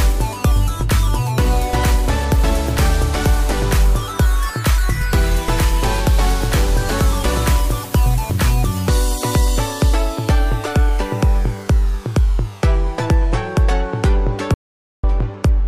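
Audio dropout to silence from 14.54 to 15.04 s: the sound cuts to silence for about half a second, likely from an input lost while recording continued.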